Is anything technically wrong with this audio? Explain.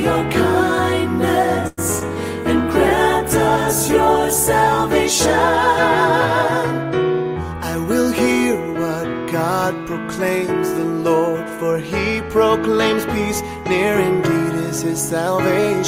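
Yes, there are four separate problems, all within the first eight seconds of the clip.

From 1.67 to 1.79 s there's a call audio freeze. The last bit of sound just carries on as a fading buzz for about 100 ms. The likely cause is packets stalling in transit so the jitter buffer ran dry and the receiver had to improvise. When the packets showed up, playback picked up where it left off. Nothing was lost, but everything after that point now sits roughly 0.1 s later.

Right after, from 1.99 to 2.03 s, there's a short concealed packet loss. About 32 ms of audio never made it to the decoder in time. The receiver patched roughly 12 ms of that by extending the preceding sound and then blending back into the real signal. The other 20 ms is simply gone. You hear it as a quick smear or wobble rather than a clean gap.

From 2.53 to 6.37 s you get a call bitrate drop. The bandwidth estimate fell and the Opus encoder went from 48 kbps down to 16 kbps, staying at the bottom for about 1.76 s. 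At that rate it codes much more coarsely and trims the top end. The audio turns muffled and a bit watery until the rate climbs back.

Finally, between 7.54 and 7.96 s there's a jitter buffer speed-up. The buffer was holding more audio than its target, so the receiver kept snipping out short pitch-period chunks to catch up. Around a twentieth of a second was removed in total. The result is playback running at about 109% speed with the pitch unchanged, so that stretch sounds rushed.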